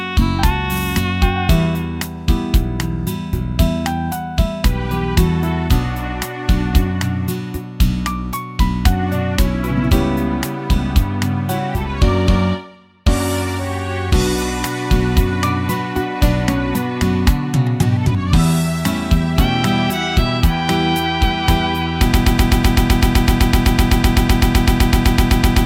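At about 22.1 s the sound locks into a broken-record loop: a 127 ms fragment repeats back to back, roughly 28 times, right through to the end. The likely cause is a stalled player or stream resending its last buffer, so whatever should have followed is simply gone.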